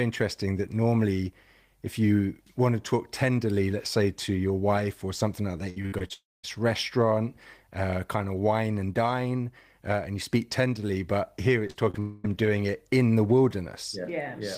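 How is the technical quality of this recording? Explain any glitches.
The recording has network-transmission glitches in two clusters, around 6 s and 12 s, where parts of the speech are missing or patched over.

From 5.69 to 6.12 s, just after "wife or something like", there is repeated packet loss with a robotic sound. Five separate holes, the longest 65 ms, were each filled by extending the preceding sound, so nearly half that stretch is synthetic. The result is choppy, with pieces missing. What sets it apart from a single dropout is this rapid alternation of real and filled audio.

Two long network dropouts follow. From 6.14 to 6.45 s, before "restaurant uh kind of", about 0.3 s never arrived. A fading continuation gives way to roughly 0.2 s of silence. From 12.00 to 12.29 s, before "doing it in the", about 0.24 s is missing. There the fill runs the whole way with no silent stretch. 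Both are likely network stalls. Unlike the choppy stretch, each is one continuous gap.

Short concealed packet losses occur at 11.67–11.71 s, 11.71–11.76 s and 11.90–11.96 s. Each drops 20–40 ms, which the receiver bridges by continuing the last sound before blending back. They come across as brief smears or wobbles, too short and isolated to produce the robotic texture.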